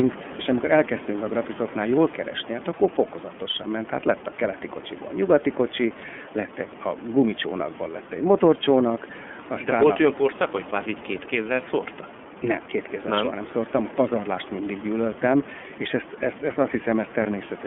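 From start to finish the speech runs through an iLBC codec, and you can plainly hear it. The band sits between about 200 Hz and 3.4 kHz, so there's no air or sibilant sparkle up top. iLBC codes the excitation of each frame on its own rather than leaning on the last one, and the rough, slightly synthetic grain points to its 30 ms frame mode at 13.33 kbps. The room noise, about 15 dB under the speech, comes through the same narrow band.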